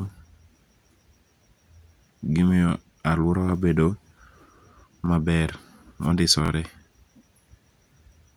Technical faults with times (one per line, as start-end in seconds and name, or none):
2.69-2.72 repeated buffer
5.06-5.09 repeated buffer
6.46-6.50 repeated buffer